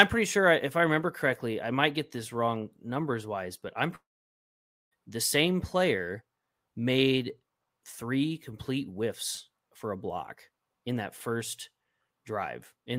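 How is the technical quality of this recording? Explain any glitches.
The recording has one clear glitch, a long network dropout from 3.95 to 4.93 s. The likely cause is a stall in the incoming stream that left a gap of about 0.96 s with no audio data to play. The receiver stretches the last sound it had into a brief buzzy tail, and for the remaining 0.89 s or so there is only silence. The speech then resumes with that stretch missing.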